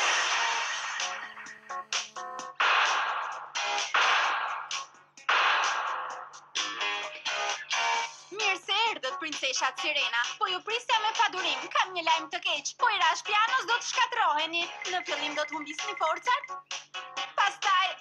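From 0.99 s to 2.47 s, a GSM phone buzz sits under the sound. A 2G handset close by was on a call, pulsing its transmitter about 217 times a second. The audio circuit picked up those radio bursts and rectified them into the signal path. The result is a harsh, rasping buzz at 217 Hz, rich in harmonics. It holds steady throughout, with no link to the audio itself. It sits about 32 dB below the signal.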